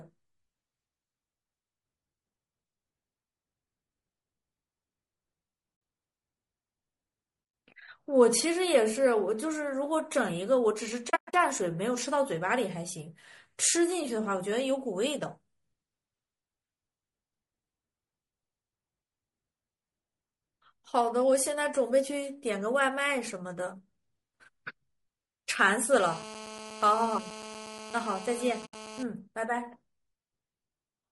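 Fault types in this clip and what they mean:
Low-delay AAC compression: Across the whole clip the speech sounds rough and grainy, with a hissy fill between the harmonics and a thin, artificial top end. That's plainly audible, and it's most likely the low-delay AAC used for video calls, where short frames don't resolve pitch detail well. The amount of damage fits a modest rate somewhere around 32 kbps for this codec.
AAC frame loss with muting: The sound softly drops out and comes back three times, because the decoder zeroes the missing frames and the overlapping windows fade the edges. The first hole is a short 60 ms one at 5.75 s. From 11.09 to 11.34 s there are several gaps totalling 200 ms, the longest roughly a tenth of a second. The last is 80 ms at 28.65 s, sitting under the buzz.
GSM phone buzz: From 25.93 to 29.03 s a hard, raspy buzz at 217 Hz with lots of harmonics sits about 15 dB below the speech and has nothing to do with it. 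That's a 2G phone transmitting in bursts nearby, with the audio circuitry rectifying the radio pulses. It holds nearly steady rather than pulsing on and off, which points to a phone on an active call.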